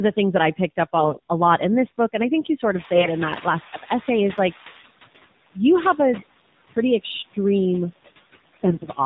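Right through the call, the AMR narrowband mobile codec caps everything at 4 kHz and gives the voice a buzzy, synthetic edge, which fits the 7.4 kbps mode. Noise suppressor artifacts sit underneath: background pulled down about 17 dB between phrases, so the noise sinks between words and rises under them. From 0.96 to 1.19 s come the first AMR bit errors. Flipped bits in the less protected part of each frame scramble the pulse positions, so the voice turns hoarse and gargly while keeping its pitch. Around 2.5 s the room noise jumps by about 17 dB, and from 2.74 to 4.9 s the noise suppressor is catching up. Its estimate lags, so the noise pushes through before sinking by about 14 dB over roughly 2.2 s. Within that, 2.94 to 3.09 s brings more scratchy bit-error damage. The same happens at 6.18 to 6.38 s and again at 8.42 to 8.88 s. The call microphone's high-pass trim of the lowest bass is normal.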